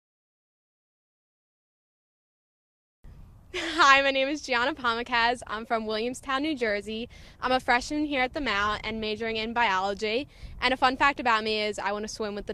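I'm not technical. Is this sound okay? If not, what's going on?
No. From 5.42 to 9.79 s there's a call bitrate drop: the connection briefly allowed far less data, so the sound turns rough and muffled until it recovers.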